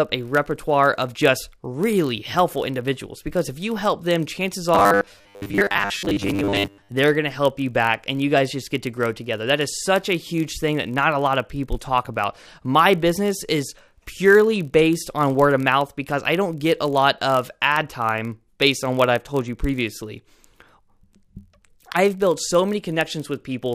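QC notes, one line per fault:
Throughout: block size mismatch (padded). There's a steady low buzz at about 43.1 Hz under everything, because one stage hands over slightly short blocks and the reader pads the remainder with zeros, leaving a tiny silent gap once per block. That rate fits a 1024-sample read block. The padding is so small that playback runs at 0.999x, so the slowdown is practically inaudible and the pitch stays where it should be.
4.75–6.89 s: robotic sound from repeated short buffers. For these two-odd seconds the speech collapses into a stiff, metallic drone locked at 100 Hz, still loosely tracking the speech's rhythm. The likely cause is audio arriving too slowly, with the software looping the last 10 ms chunk to fill time. That loop length is what pins the pitch at 100 Hz, and roughly 70 percent of the real audio gets skipped over.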